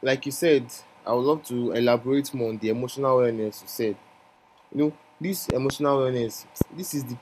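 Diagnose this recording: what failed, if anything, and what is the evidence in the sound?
Loud pop, likely an analogue wiring transient: a double pop at 5.50–5.72 s and a single one at 6.61–6.64 s, about 15–20 dB up. Speech continues underneath, unlike a dropout.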